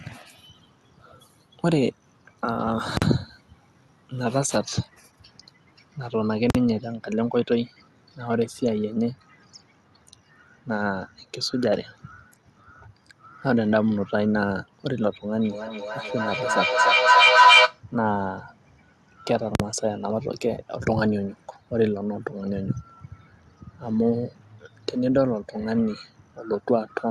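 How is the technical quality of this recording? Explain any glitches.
The recording has two kinds of serious glitches: three brief full-scale bursts and a stretch of acoustic feedback, heard through a call codec that adds coding noise and cuts off the top end near 12 kHz.

Invalid numbers at full scale occur at 2.97, 6.50 and 19.55 s. Each is a very loud pop, then about 46 ms of dead silence, then another pop. A processing calculation produced invalid values that were clamped to the extreme sample value for one whole block, which fits a 2048-sample block.

Feedback howl runs from 15.39 to 17.83 s. A tone near 1 kHz swells to about 8 dB above the speech and pulses roughly every 0.3 s. Sound from a loudspeaker was picked up by a microphone in the same room and recirculated with gain on each pass, so it built instead of decaying until the loop was broken.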